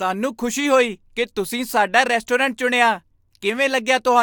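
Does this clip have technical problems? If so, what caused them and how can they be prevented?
No, the speech signal carries no technical faults, so nothing here calls for a cause or a preventive step.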